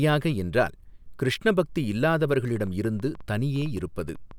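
From 2.56 s to 4.32 s, a train of clicks runs over the speech. There are about fifteen of them, at roughly 7.4 per second. The spacing is uneven, so they sound like a stuttering tick rather than a steady beat. Each click has much the same sharp shape. They peak at about the level of the speech itself, so they stand out clearly. They also sound in the gaps between phrases. The likely cause is electrical interference or a faulty connection or power supply.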